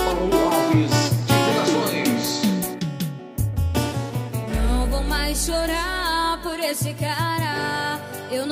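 No audible technical faults occur anywhere in this recording.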